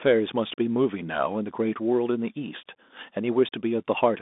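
Throughout the speech, Bluetooth CVSD headset codec artefacts are plainly audible. The band runs roughly 200 Hz to 3.6 kHz, with nothing above 3.8 kHz. The one-bit delta coding, consistent with a 64 kbps link, leaves granular hiss, gritty sibilants and slope-overload distortion on loud high-frequency sounds.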